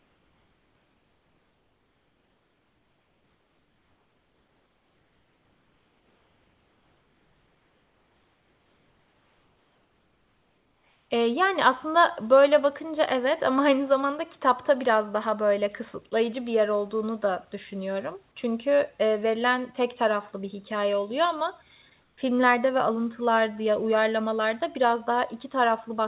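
From the start to 11.1 s, the background is a steady, featureless hiss about 4 dB quieter than the room tone around it, with none of its natural detail. At 22.02 s, between "bir hikâye oluyor ama" and "ve alıntılar di ya", the same flat noise fills a 160 ms gap. This is comfort noise in place of the background, likely from discontinuous transmission: the sender stopped sending during pauses, and the receiver synthesised noise within a band that stops at 4 kHz.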